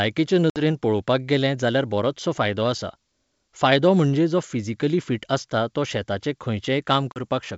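Packet loss on an ADPCM call at 0.50–0.61 s, just before "पळोवपाक गेलें जाल्यार", and at 7.12–7.20 s leaves hard-edged holes. The decoder's adaptive predictor then falls out of step, so speech returns and briefly distorts.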